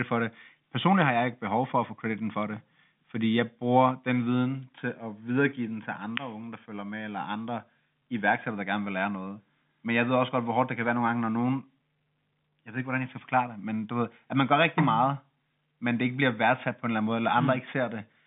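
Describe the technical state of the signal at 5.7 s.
At 5.7 s the audio is intact, with no fault there, and what can be heard is the ordinary narrow band of G.711 telephone coding, with nothing above about 3.7 kHz.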